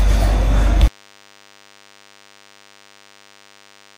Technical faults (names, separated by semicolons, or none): DECT cordless phone buzz